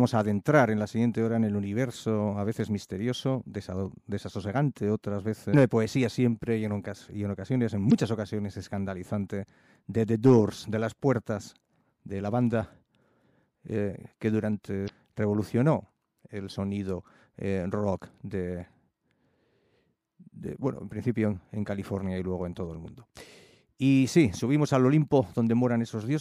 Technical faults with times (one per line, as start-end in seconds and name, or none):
5.50-5.54 damaged data in a compressed stream
7.88-7.93 damaged data in a compressed stream
14.85-14.90 damaged data in a compressed stream